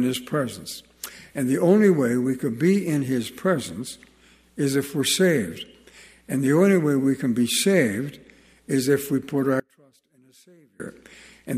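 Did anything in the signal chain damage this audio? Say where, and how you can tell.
Yes. An audio dropout to a faint residue runs from 9.60 to 10.80 s, about 1.2 s. The sound cuts abruptly to a faint leak far below normal level, then returns just as suddenly. A pause or fade would not do that. The path stayed live, likely a lost feed upstream of a connected input.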